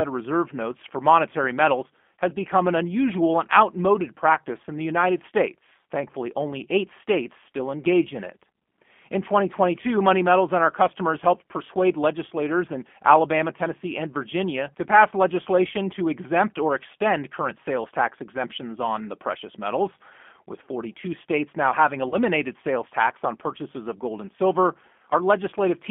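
From the very start the whole clip carries the sound of the G.729 codec. The band is squeezed to roughly 200 Hz to 3.4 kHz, and the speech has that slightly rough, synthetic edge you get when a codec rebuilds each 10 ms frame from a vocal tract filter, a pitch predictor and a handful of pulses. The damage is plainly audible, and the character fits an 8 kbit/s G.729A stream.

Around 22.09 to 22.16 s, just after "states now having" and just before "sales tax on purchases", there's a short gap covered by VoIP packet loss concealment. About 30 ms of audio went missing, which fits a single lost packet. The decoder stretched its last pitch and filter settings across the hole, so you hear a brief smeared sound that sags in level, and the speech takes a moment to firm up again once real frames resume.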